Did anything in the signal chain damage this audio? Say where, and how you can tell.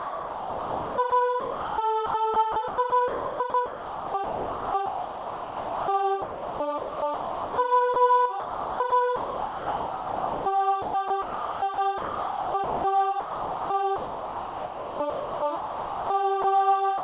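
Yes. From 0.0 to 16.44 s the sound is repeatedly chopped: quiet passages and the edges of louder ones keep dropping out. Roughly 10.6 s of that stretch is fill rather than signal. This is sound chopped by the voice detector, at the call-processing stage. The sender's detector toggled transmission on and off, and the receiver likely inserted RFC 3389 comfort noise in every gap.

A second, brief fault closes the clip. From 16.98 to 17.03 s, the final 60 ms of sound gives way to steady noise and never returns before the end. This is sound dropped by the voice detector, again in call processing. The detector judged the trailing material to be background and stopped sending, and the receiver filled the gap with comfort noise, likely RFC 3389. The band limit at 4 kHz throughout points to a narrowband G.711 call path.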